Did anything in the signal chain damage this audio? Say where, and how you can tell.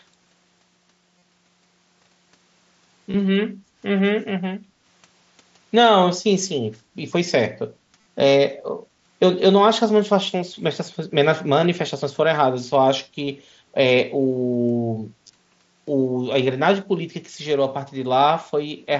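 Yes. Concealed Bluetooth headset packet loss on the radio link between headset and phone: at 1.18–1.22 s (37.5 ms), 3.11–3.14 s (30 ms), 7.99–8.06 s (52.5 ms scattered over 75 ms), 13.25–13.27 s and 15.27–15.30 s (22.5 ms each). The receiver bridges each gap by repeating a recent stretch of waveform, which sounds like a brief buzzy, steady tone. A slight warble follows where real audio resumes. The light graininess from the mSBC wideband codec sits underneath these dropouts.

Background gated by the echo canceller, a call-processing stage: at 3.56–3.74 s and 4.61–4.82 s, the room sound dips by about 7 dB for around a fifth of a second each time. The canceller sharply cut microphone gain while the far-end loudspeaker played, then restored it on release.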